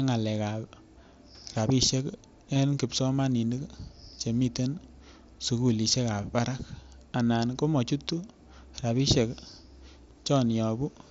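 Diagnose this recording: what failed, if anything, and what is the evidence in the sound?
A wireless microphone noise hit in the analogue radio link runs from about 1.54 to 1.65 s as a short swish of static. On a spectrogram it is a broadband noise smear over the speech. The waveform thickens into fuzz because the FM signal faded as reflections cancelled and receiver noise rose.

Concealed Bluetooth headset packet loss on the headset-to-phone link, carried by the mSBC codec with speech up to 8 kHz, occurs at 2.54 s (about 15 ms, fitting two lost frames) and 7.43 s (about 7.5 ms, fitting one). The receiver repeated recent waveform, leaving near-hidden copied cycles and briefly frozen harmonics on the spectrogram.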